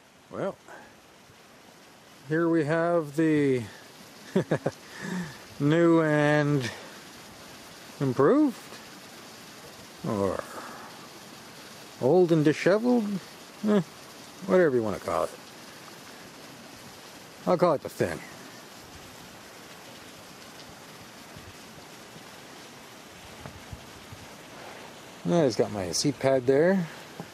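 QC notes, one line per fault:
No faults heard anywhere in the clip.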